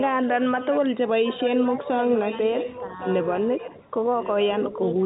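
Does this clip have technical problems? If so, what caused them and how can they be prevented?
Yes. A quieter, delayed copy of the speech trails about 1.1 s behind the talker. It sits roughly 10 dB down at 0.0–0.8 s and 1.23–3.38 s, and about 15 dB down at 3.58–3.82 s and 4.2–4.44 s. This is likely an echo leak from the far end, where a loudspeaker's echo canceller let part of the sound back into the call. A headset or a better-tuned echo canceller prevents it.

The speech briefly dips by about 5 dB at 1.64–1.71 s, 3.55–3.62 s, 3.83–3.94 s and 4.72–4.80 s. This is likely speech suppressed in double talk: with both sides sounding at once, the canceller turned down the talker along with the echo. Better double-talk detection in the canceller prevents it.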